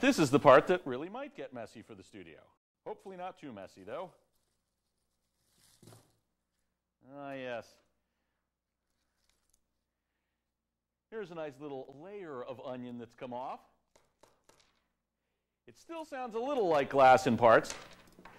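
From 16.16 to 17.15 s, zipper noise: a roughly 20 dB level change in unsmoothed steps, about forty a second, ticks. The envelope staircases, and faint vertical lines appear on a spectrogram.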